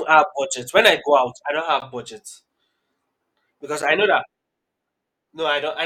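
At 0.13 to 0.16 s the speech runs into hard clipping. For about 30 ms the peaks hit the ceiling of a stage that cannot pass anything larger, and their tops are sheared flat. The overdrive is only about 0 dB, so the waveform just touches the limit rather than being driven deep into it. The result is a short, brittle crackle on the loud peak, not a sustained fuzz. It differs from codec smearing because the added roughness is bright harmonic grit locked to the loudest moment.

Two gaps between stream segments follow, at 1.80 to 1.82 s (about 16 ms) and at 3.82 to 3.83 s (about 7 ms), the second just before "I know that". In each, the timestamps of adjacent 2-second segments fail to meet, and the player fills the space with silence. This gives a hard-edged hole. Unlike a dropout, nothing is missing: the speech resumes intact, only delayed. The spacing of roughly 2 s between the holes also sets it apart from random packet loss.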